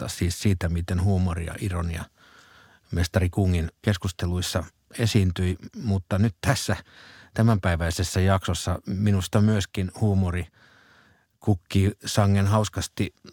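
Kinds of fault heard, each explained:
No fault turns up anywhere in this bit of speech, so there's nothing to list or explain here.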